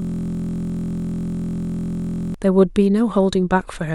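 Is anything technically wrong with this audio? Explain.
Yes. From the very start until 2.34 s, there is a system hang loop, already under way when the clip begins. The computer or audio driver stopped supplying new samples, and the sound hardware kept replaying the same ring buffer. That 23.22 ms slice, which fits a 1024-sample buffer, repeats exactly about a hundred times. Because the loop is short, it fuses into a steady buzz at about 43.1 Hz instead of a stutter, and the speech resumes only after 2.34 s.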